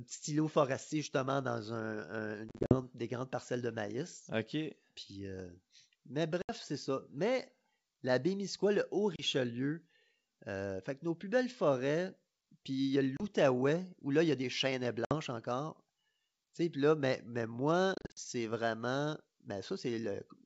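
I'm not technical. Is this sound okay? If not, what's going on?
No. This speech has packet loss on an ADPCM call: brief silent gaps at 2.49–2.78 s (after "forestier justement dans un"), 6.42–6.51 s, 9.16–9.24 s, 13.17–13.22 s, 15.05–15.14 s (after "y a des chênes") and 17.95–18.19 s (after "puis là mais mais"). Unlike an ordinary dropout, the voice comes back slightly distorted before settling.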